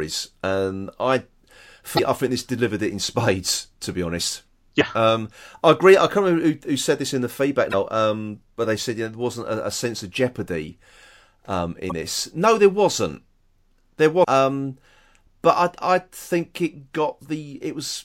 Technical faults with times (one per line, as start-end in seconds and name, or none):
1.95-1.99 damaged data in a compressed stream
4.77-4.81 damaged data in a compressed stream
7.70-7.74 damaged data in a compressed stream
11.88-11.92 damaged data in a compressed stream
14.20-14.25 damaged data in a compressed stream